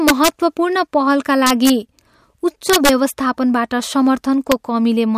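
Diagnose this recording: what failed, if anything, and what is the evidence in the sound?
Integer overflow at 0.08–0.28 s, 1.47–1.70 s, 2.70–2.89 s and 4.52 s: loud stretches of the speech break into harsh cracks far sharper than clipping. The fault sits in a fixed-point gain or sample-format conversion stage. Peaks pushed past the largest integer, by about 3 dB in the first and third events and about 1 dB in the second, wrap to the opposite sign instead of being limited. Each peak over the limit flips across the full range. The brief event at 4.52 s barely crosses the limit.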